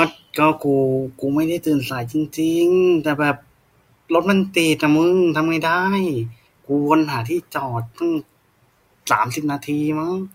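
Listening closely to the speech, nothing stood out as a technical fault at any point.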